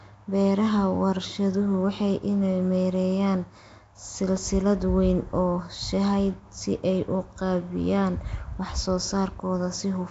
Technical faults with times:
0.00-10.11 Nellymoser compression

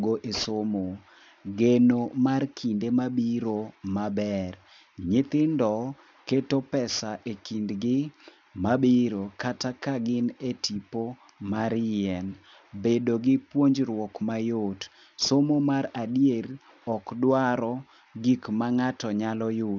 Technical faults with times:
0.00-19.79 aliasing

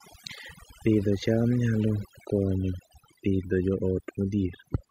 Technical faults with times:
0.00-4.90 overdone noise removal

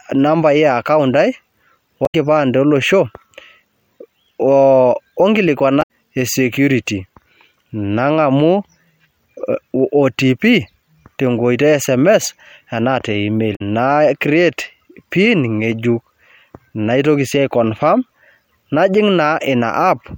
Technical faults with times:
2.03-2.14 damaged data in a compressed stream
5.79-5.89 damaged data in a compressed stream
13.52-13.61 damaged data in a compressed stream

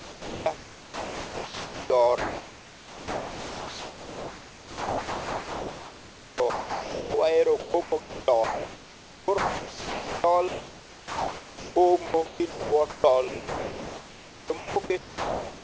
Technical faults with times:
0.00-0.46 sound dropped by the voice detector
0.00-1.90 comfort noise in place of the background
2.18-7.14 sound chopped by the voice detector
7.60-11.76 sound chopped by the voice detector
12.06-15.63 sound chopped by the voice detector

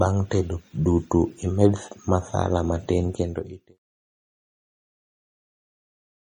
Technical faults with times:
0.00-6.32 MP3 compression

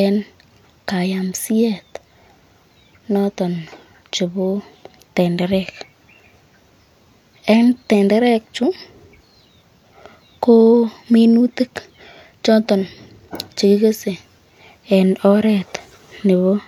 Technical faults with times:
none

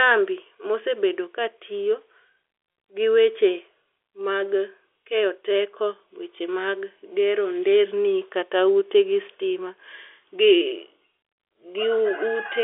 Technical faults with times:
none

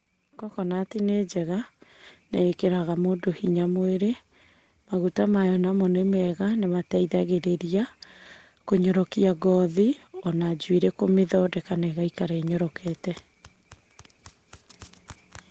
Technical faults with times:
0.54-1.83 automatic gain rising

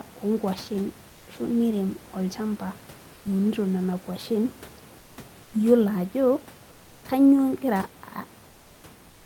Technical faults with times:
1.09-1.27 comfort noise in place of the background
3.13-3.25 comfort noise in place of the background
4.99-5.17 comfort noise in place of the background
5.43-5.53 comfort noise in place of the background
8.45-8.83 comfort noise in place of the background
9.09-9.26 comfort noise in place of the background

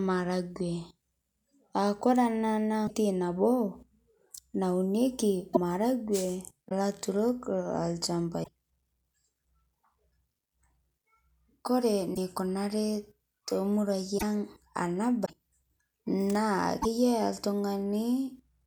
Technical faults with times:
2.86-2.91 broken MP3 bit reservoir
5.53-5.57 broken MP3 bit reservoir
6.68-6.72 broken MP3 bit reservoir
8.43-8.48 broken MP3 bit reservoir
12.14-12.18 broken MP3 bit reservoir
14.17-14.23 broken MP3 bit reservoir
15.24-15.30 broken MP3 bit reservoir
16.81-16.86 broken MP3 bit reservoir

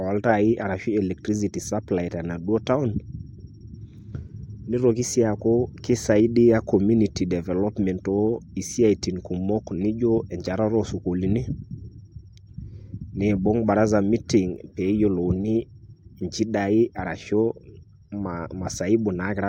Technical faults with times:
none

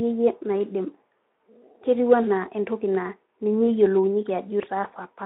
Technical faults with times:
none

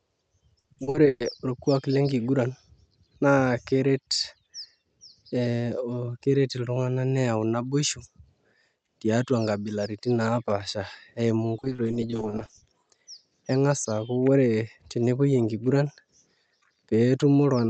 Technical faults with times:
0.60-1.40 repeated packet loss (robotic sound)
11.57-12.62 repeated packet loss (robotic sound)

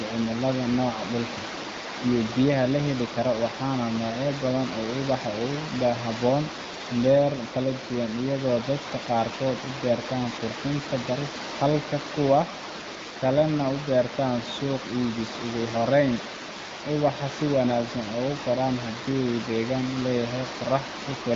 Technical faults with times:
none

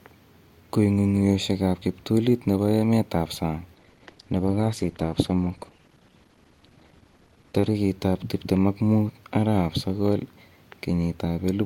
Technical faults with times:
3.75-7.75 adaptive stream at a lower bitrate

